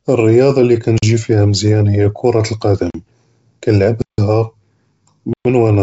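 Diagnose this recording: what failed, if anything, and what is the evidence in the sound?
Blocks of digital silence at 0.98–1.02 s, 2.90–2.94 s, 4.02–4.18 s and 5.33–5.45 s, the first falling between "אֶלְרִיַּاضָה לִי" and "פִיהָ מְזְיַאן". The speech drops straight to silence and returns with no fade. The two identical 43 ms gaps fit a 2048-sample output buffer left unfilled in time. The 161 ms and 119 ms holes point to longer stalls. This is a driver or buffer underrun.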